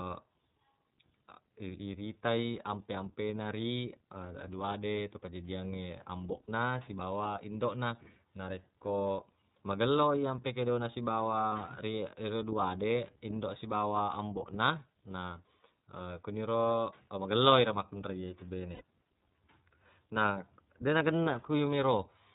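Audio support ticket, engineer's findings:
iLBC codec, throughout: band-limited below 4 kHz, rough, synthetic texture plainly audible; each frame's excitation coded independently; 30 ms, 13.33 kbps mode.

Lost iLBC frames, 6.42–6.49, 11.48–11.52, 18.74–18.82, 21.24–21.27 s: brief buzzy held-vowel fill. Decoder repeats last pitch cycle with noise, then recovers immediately.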